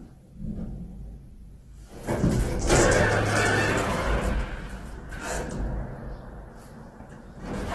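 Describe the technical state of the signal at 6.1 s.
At 6.1 s the sound is grainy and rough, with nothing above 12.1 kHz, as it is throughout; that's likely heavy Opus compression, bands noise-filled at roughly 12 kbps.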